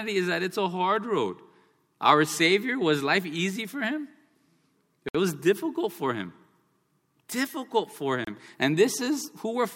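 At 5.09 s the speech drops to silence for about 60 ms, resuming at "was difficult for him". At 8.25 s a shorter 28 ms gap follows. Both are likely a Bluetooth stall. Delayed packets emptied the headphone buffer, so playback paused until they arrived.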